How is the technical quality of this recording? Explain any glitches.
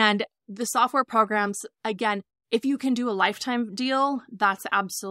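No glitches can be heard in this speech recording: the signal carries through without dropouts, clicks, distortion or other technical faults.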